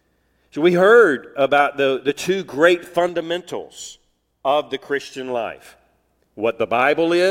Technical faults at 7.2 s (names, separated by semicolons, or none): sample clock jitter